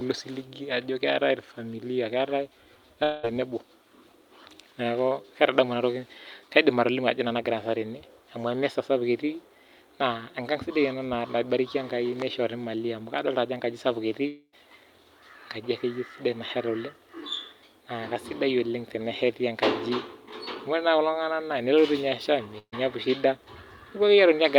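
At 3.03 s and again at 14.27 s the speech breaks off and is replaced by a smeared continuation of the last sound, a buzz or hiss that fades. The first gap runs to 3.25 s, about 200 ms lost; the second runs to 14.55 s, about 260 ms lost, and ends in a brief spell of silence before speech returns further on. Both are likely a long network dropout: no audio arrived, and the receiver filled the gap by extrapolating until it gave up.

At 22.59 s a shorter hole appears, ending at 22.74 s with about 140 ms missing. This is a burst of packet loss. A few consecutive packets failed to arrive in time, so the decoder stretched the preceding sound and turned it down, leaving a fading buzz or hiss with a spell of silence before resuming. Its length, within the 50 to 150 ms range, sets it apart from the longer dropouts, which go on for a fifth of a second or more.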